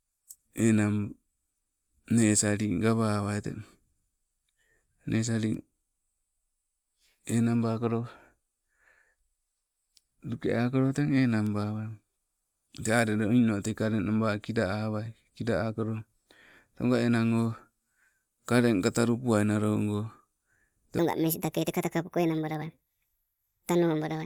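From 20.99 s to the end at 24.25 s, a section at the wrong speed is heard. The speech suddenly runs at 1.49 times its normal rate. Pitch rises with it, by about seven semitones. The voice turns thin, high and rushed, with shortened pauses. Speed and pitch jump together at the boundary. The likely cause is this last stretch being played back or resampled against the wrong clock.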